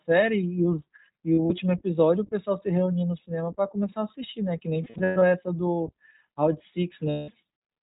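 The whole clip goes through the iLBC codec, and it's plainly audible: nothing above 4 kHz survives, and the speech has a rough, slightly synthetic edge. That fits iLBC's 20 ms mode at around 15.2 kbps.

Lost iLBC frames hit three times. From 1.35 to 1.52 s, about 80 ms drops out in short scattered bits. From 4.82 to 5.22 s it's about 260 ms, with stretches near a tenth of a second. From 7.10 to 7.30 s it's about 180 ms. Each time the decoder loops the last pitch cycle with noise, giving a held, buzzy vowel before the speech snaps back.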